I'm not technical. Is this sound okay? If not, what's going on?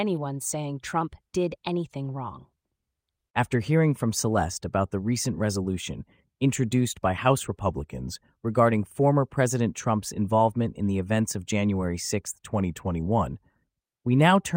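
No. The speech briefly changes speed three times. From 1.01 to 1.85 s it runs about 6% fast and rises about a semitone. From 7.63 to 8.15 s, just before "regarding former", and from 12.53 to 13.27 s, it runs about 6% slow and drops about a semitone. Each time it then snaps back. This is most likely a drift correction step, where software keeping two clocks in sync briefly changed the playback rate to adjust its buffer.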